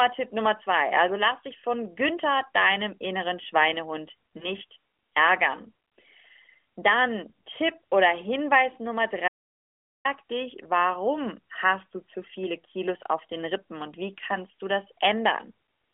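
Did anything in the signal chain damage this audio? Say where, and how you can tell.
Yes. Network stage: lost AMR speech frames at 4.38 to 4.47 s, a single 20 ms frame concealed from the previous pitch and gain, giving a brief dip or warble rather than silence.

Capture or link stage: an audio dropout to silence from 9.28 to 10.05 s, about 0.77 s of silence with no room tone, ending just before "dich warum hast du", likely a lost input.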